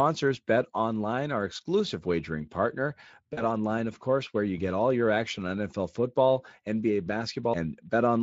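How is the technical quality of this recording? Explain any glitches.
The recording has one glitch. It comes through a Speex codec with light coding damage. After "our exclusive wagering partner", from 3.33 to 3.42 s, there is VoIP packet loss concealed by the speech codec. About 40 ms of audio went missing, which fits two lost 20 ms frames. The decoder filled the gap by extending its last pitch and filter at falling gain. The speech smears into a brief buzzy tone or coloured noise that fades. It stays weak or distorted for tens of milliseconds or more after about 3.42 s.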